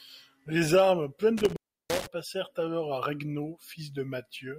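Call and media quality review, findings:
Speech drops out between 1.37 and 2.07 s, with crackle where the signal breaks and returns and faint hiss in the gaps; the line is open for about 340 ms in total. Intermittent contact: a loose cable, plug or jack briefly losing its connection. Reseat or replace the connector or lead.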